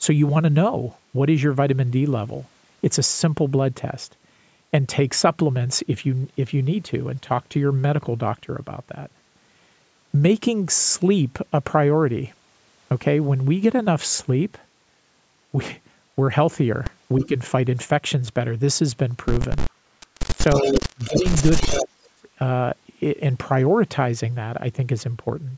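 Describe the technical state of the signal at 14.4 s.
At 14.4 s the signal is intact, with no dropout, distortion or other fault, only the ordinary call microphone processing shaping the sound.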